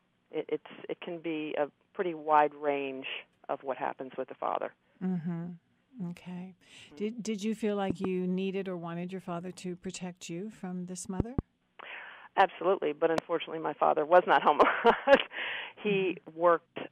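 Loud pops cut through the audio, double at 7.90–8.07 s and 11.20–11.41 s, single at 13.18–13.20 s. They stand well above the sound. Likely voltage pulses from a switch, plug or static.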